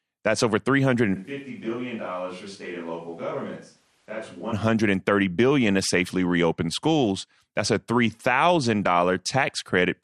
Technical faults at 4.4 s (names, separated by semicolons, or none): MP2 compression; switch to a distant microphone